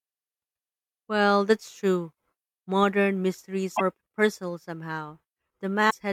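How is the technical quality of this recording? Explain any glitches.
Two brief glitches from damaged data in a compressed stream, at 3.73 to 3.81 s and 5.87 to 5.95 s: corrupted frames make the decoder lose sync and resynchronise, producing a short chirp or blip.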